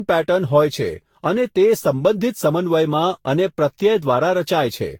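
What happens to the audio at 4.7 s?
At 4.7 s the speech sounds swirly, smeared and hollow, as it does throughout. Attacks blur, and nothing is above 18.7 kHz. This is generation loss, likely from around ten lossy re-encodes.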